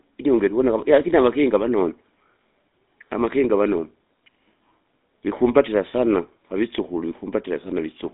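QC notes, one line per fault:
Throughout, GSM full-rate codec. Speech is confined to 200 Hz to 3.7 kHz. Sparse pulse excitation adds a plainly audible buzzy, gravelly roughness.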